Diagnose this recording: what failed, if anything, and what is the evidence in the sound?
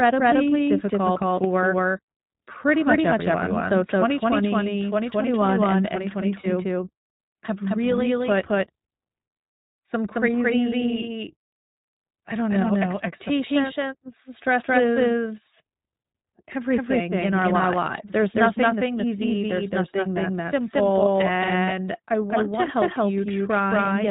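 A second, equally loud copy of the speech trails about a fifth of a second behind throughout. This doubled audio track is likely a second, slower capture path mixed in.

The whole clip is narrowband, with nothing above 4 kHz, and sounds plainly rough and synthetic. This is iLBC codec damage at the codec stage; the character fits its 20 ms, 15.2 kbps mode.

From 6.40 to 6.47 s a 40 ms stretch turns into a held, buzzy vowel, then recovers at once. These lost iLBC frames, most likely two, were concealed by repeating the last pitch cycle.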